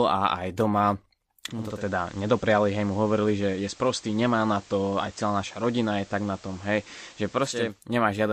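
Digital radio blending to analogue runs from 1.42 s to 7.88 s. The receiver lost its digital signal and cross-faded over about 0.49 s to the station's FM broadcast, so hiss rises, sitting roughly 25 dB under the speech, with no level change.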